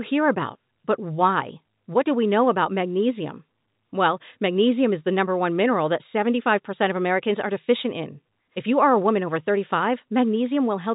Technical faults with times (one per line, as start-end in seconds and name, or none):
none